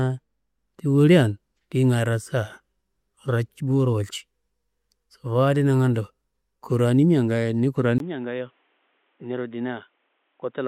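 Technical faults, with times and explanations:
7.98 s to 10.68 s, input switched to a poorer device: After a gap of about 20 ms, the speech turns dull and boxy and stays so to the end. Nothing comes through above 3.8 kHz. The level falls by roughly 10 dB. A new, faint background noise appears, far below the speech. The likely cause is the recording moving to another, narrower-band input, such as a headset's call profile, with its own tone and noise.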